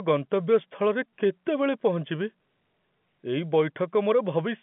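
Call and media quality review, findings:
No faults found; the speech sits in a narrow telephone band with nothing above 3.8 kHz and at most faint coding noise, consistent with normal G.711 A-law coding at 64 kbps.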